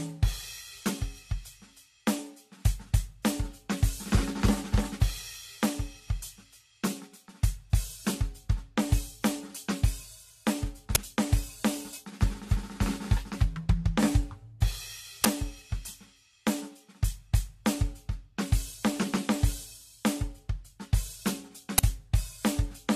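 Music with a swirly, hollow character, smeared attacks and nothing above 14 kHz, more damage than one encode would leave, points to generation loss, likely around five passes of low-bitrate AAC. Brief loud cracks at 10.95, 15.24 and 21.78 s, each about 10 ms long, are an uninitialised buffer: leftover memory played as samples.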